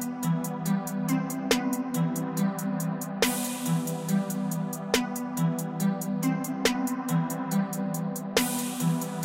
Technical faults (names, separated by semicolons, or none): none